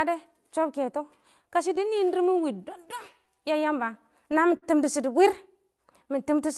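Clock drift between sender and receiver runs through the whole clip. The sender's clock is roughly 4 percent slow. The receiver's jitter buffer keeps draining as a result. Small timing hiccups recur at uneven intervals from start to finish.

Repeated timing corrections span 0.04 to 6.43 s. To keep pace, the receiver repeats short pieces of sound. Playback runs at about 98 percent speed, adding roughly 150 ms overall.

A short stall from a late packet occurs at 4.57 to 4.64 s. The buffer ran empty. The receiver held the last sound for 54 ms until the packet came. Nothing is lost, but one sound drags, with a slight buzz or dip. This plays through an Opus call codec.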